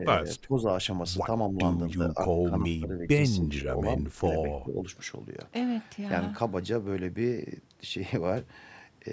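The speech dips in level six times within the first five seconds: at 0 to 0.06 s, 0.23 to 0.64 s, 1.48 to 1.58 s, 1.96 to 3.08 s, 3.36 to 4.44 s and 4.63 to 4.86 s. The mildest dip is about 5 dB. The deepest, in the second span, reaches about 20 dB. The longer spans drop out in pieces. This is likely speech suppressed in double talk. The echo canceller took the talker for loudspeaker echo and pulled the voice down.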